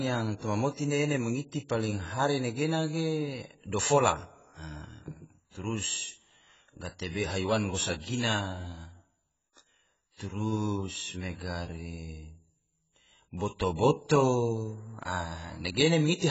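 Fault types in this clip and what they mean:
AAC compression: throughout, the speech sounds dull and smeared, cut off above 7.7 kHz, likely from AAC-LC coding starved of bits, which fits about 16 kbps.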